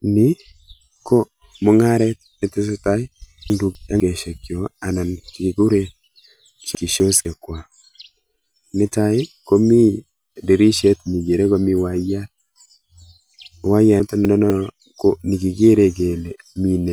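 Chunks out of order at 3.5–4.0 s, 6.75–7.25 s and 14.0–14.5 s: a 250 ms chunk plays one chunk late, so the sound jumbles briefly at the hard joins. Unlike a dropout, nothing is missing.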